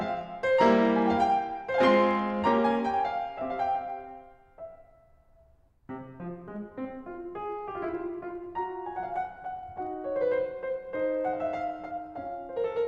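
Right through this music there's a block size mismatch, truncated: block tails get dropped, leaving a 46.9 Hz buzz, which fits 1024-sample blocks, while tempo stays normal.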